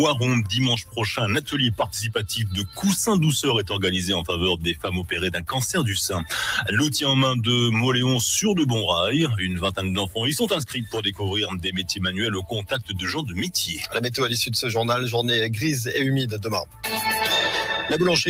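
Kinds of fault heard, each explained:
Noise suppressor applied to music or sounds: a speech-tuned noise reducer stays active over the whole clip and treats steady tones, ambience and decays as noise. Its gain keeps shifting over a range of around 10 dB, so the level pumps with the material, unlike a fixed filter's constant colouring.
Sound cut by the noise suppressor: seven passages, at 2.64, 10.62, 11.47, 12.4, 13.22, 13.7 and 16.26 s, are taken for noise and pulled down by about 5 to 13 dB, deepest at 12.4 and 16.26 s. Sustained or fading parts sink while sudden onsets pass, unlike a dropout's abrupt gap.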